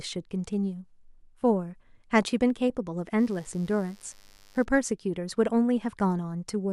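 From 3.16 to 4.66 s there's a mains buzz, a raspy 50 Hz hum with harmonics into several kHz from switching spikes leaking in, sitting roughly 35 dB down.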